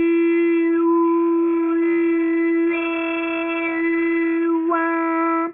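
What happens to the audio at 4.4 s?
At 4.4 s you're hearing aliasing, which runs through the whole clip rather than starting there. The audio sounds like it was knocked down to around a 6 kHz rate with no anti-alias filter first, so anything above 3 kHz folds back below it into unrelated, gritty tones, roughly 20 dB under the wanted sound, with the spectrum crowding right up against that 3 kHz edge.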